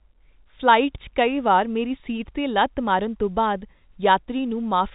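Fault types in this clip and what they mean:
No faults are present in this speech clip, which carries a narrowband telephone-style signal with nothing above about 3.8 kHz and at most a faint trace of coding noise.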